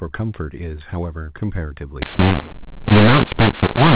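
At 2.02 s the speech abruptly turns harsh and gritty, with loudness jumping unevenly from sample to sample and the gaps between phrases filling with noise instead of falling silent. It stays that way to the end of the clip. This is a mu-law and A-law mix-up: the telephone audio was coded with the mu-law version of G.711 and decoded as A-law, so every level is mapped to the wrong value.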